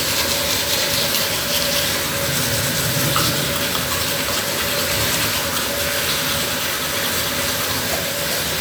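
From 1.76 s to 8.54 s, a steady ticking at 13.3 clicks per second rides over the sound: a train of clicks, likely interference or a faulty connection.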